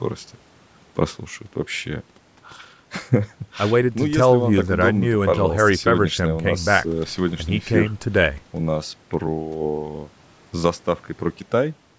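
No technical faults can be heard in the speech, which carries the normal signature of call microphone processing, with the lowest bass trimmed by its high-pass filter and nothing present above 8 kHz.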